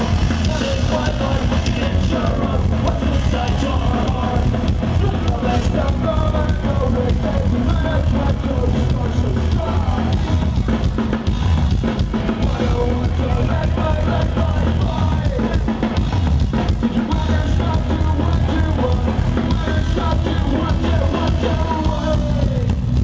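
Gain pumping runs through the whole clip. The level ducks under each loud sound by around 5 dB. Loud and soft passages sit squashed together. The likely cause is input gain set far too high, with a fast limiter clamping down. Nothing is heard above 8 kHz, as expected from call microphone processing.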